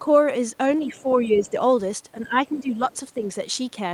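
Speech with four brief dips where the talker is pulled down while someone else talks at the same time: speech suppressed in double talk, at 0.82 to 1.06 s, 1.22 to 1.54 s, 2.22 to 2.79 s and 3.15 to 3.24 s. The likely cause is an echo canceller that could not tell its own talker from loudspeaker echo and attenuated everything. Most dips are shallow, a few dB, but the one around 2.2 to 2.8 s goes down by roughly 10 dB. On a waveform these show as short sags in the envelope. On a spectrogram the voice weakens in these spans. Alongside them is the other side's voice leaking through, at 0.92 to 1.15 s, 1.40 to 1.51 s and 2.86 to 2.97 s. It is faint and scrappy, roughly 25 dB below the talker, and the last leak is quieter still. This is likely residual echo from the far end's loudspeaker that the canceller left in the microphone signal. On a spectrogram it appears as weak, broken harmonic traces that do not follow the main voice's pitch.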